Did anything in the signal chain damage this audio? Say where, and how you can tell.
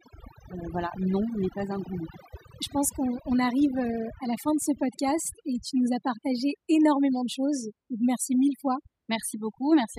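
Yes: overdone noise removal in the call processing stage, throughout. An over-aggressive suppressor gates bands near its noise estimate, leaving twinkling specks in silence.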